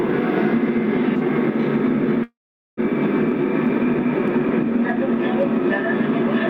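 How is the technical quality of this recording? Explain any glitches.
The recording is compromised by two faults: continuous gain pumping and a long network dropout just after 2 s.

Gain pumping runs throughout: the level swings by around 5 dB, ducking under loud sounds, likely from excessive gain driving a fast limiter. This is unlike steady compression because the breathing tracks each loud event.

A long network dropout occupies 2.23 to 2.80 s. The last sound is extended as a fading buzz or hiss, then about 0.43 s of near-silence, and the audio resumes with roughly 0.54 s lost, likely from a network interruption. Unlike a brief packet-loss click, this gap is long and continuous.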